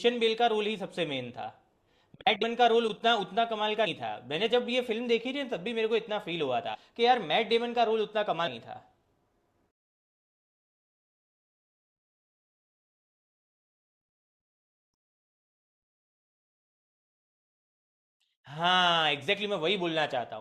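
At 2.41 s, 3.85 s, 6.73 s and 8.46 s, compressed frames are skipped in the speech. Each time the audio jumps forward by about a tenth of a second, roughly a fifth at 8.46 s. That fits a handful of 24 ms frames dropped.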